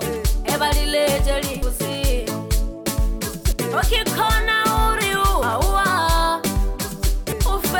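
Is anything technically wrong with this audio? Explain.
Yes. At 1.62, 3.52, 5.42 and 7.32 s, about a tenth of a second of sound skips. This is likely audio missing between chunks of 2 s, butt-joined without silence. The waveform shows abrupt seams, and the spectrogram shows vertical discontinuities.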